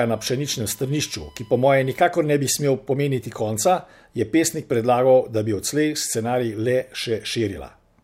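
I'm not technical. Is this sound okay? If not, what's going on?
No. For the first two seconds, up to "ne bi smel pomeniti", there's a faint steady whistle at 1 kHz under the speech. That's USB whine: the USB connection pulls power in regular one-millisecond bursts, and that rhythm leaks into the audio as a fixed-pitch tone.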